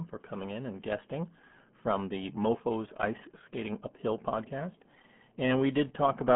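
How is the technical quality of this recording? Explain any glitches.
Technical quality is poor: the speech has passed through the RealAudio 14.4 codec for the whole clip. The damage is constant rather than an isolated glitch. The sound is squeezed into a narrow telephone-like band of roughly 150 Hz to 3.4 kHz, and nothing survives above about 3.6 kHz. Heavy coding at a rate that fits an 8 kbit/s dial-up codec discards most spectral detail, so speech comes out muffled and gargly with a watery, bubbling texture. On a spectrogram the upper region is empty above 3.6 kHz, and what remains looks blocky and smeared. The waveform loses its crisp consonant transients.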